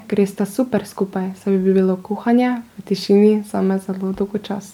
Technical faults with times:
0.00-4.73 generation loss

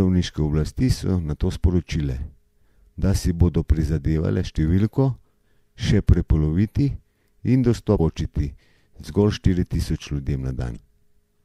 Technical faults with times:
7.96-8.00 damaged data in a compressed stream
10.73-10.77 damaged data in a compressed stream

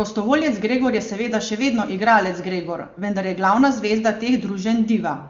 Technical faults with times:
none

